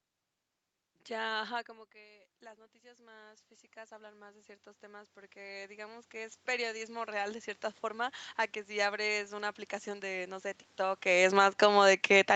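At about 1.5 s the talker moves away and the level drops by roughly 21 dB. From 1.66 s to 8.41 s the automatic gain rising fault follows as the control slowly raises its gain by about 21 dB. Speech and room noise swell together until just before "que si abres una". On a waveform, the envelope widens steadily over almost seven seconds. On a spectrogram, the noise floor brightens along with the speech.

Around 11.0 s the talker moves, and from 10.99 s to the end the automatic gain falling fault appears. The gain eases down, pulling the speech and background lower together. The waveform shows tall peaks shrinking gradually. The spectrogram, which is empty above 8 kHz throughout, fades evenly across the band.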